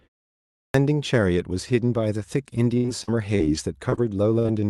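Speech carried over a call connection, with its top end stopping near 12 kHz, and it has several faults. A clipped start after a pause at 0.38 s: after 0.38 s of silence the output device was asleep and needed time to wake, so about 0.36 s of sound is swallowed and the speech bursts in abruptly at 0.74 s, already underway. Repeated packet loss (robotic sound) from 2.77 to 3.41 s: four separate holes, the longest 65 ms, were each patched by extending the preceding sound, so about a quarter of that stretch is synthetic and it comes out choppy. Short concealed packet loss at 3.89 and 3.96 s: two holes of about 20 ms each were filled by continuing the last sound and blending back, heard as brief smears or wobbles. A burst of packet loss from 4.39 to 4.46 s: roughly 60 ms went missing, the receiver stretched and faded the previous sound into a held buzz or hiss, then the speech resumes with that piece gone.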